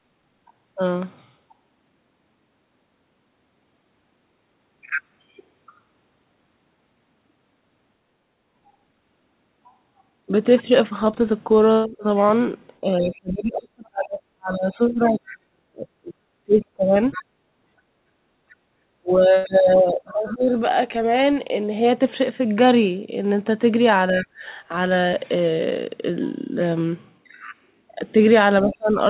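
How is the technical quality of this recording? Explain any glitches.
The recording has clear echo-control problems during overlapping talk. The band stops at 4 kHz, which fits a narrowband G.711 mu-law call path.

Speech suppressed in double talk, 11.87–20.56 s, 24.12–24.44 s and 28.63–28.98 s: the echo canceller likely could not separate the two talkers, so the speech dips by up to about 35, 10 and 25 dB. In the first span this adds up to roughly five seconds.

Other side's voice leaking through, 11.88–20.36 s, 24.2–24.26 s and 28.6–28.75 s: echo was likely left over from the loudspeaker, so a second voice can be heard about 20, 30 and 15 dB below the speech.

Background gated by the echo canceller, 17.25–18.37 s: the canceller clamped the microphone hard while the loudspeaker played. The room sound drops by up to about 25 dB for roughly 0.7 s in total.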